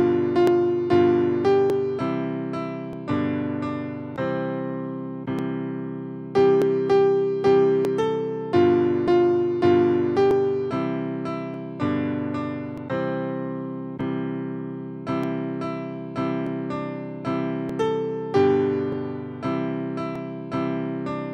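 From 0.47 s to 20.16 s, a brief click recurs every 1.23 s, around fifteen in all. These are clock drift buffer slips, likely from two clocks roughly 0.1 percent apart, forcing the buffer to drop or repeat a few dozen samples each time.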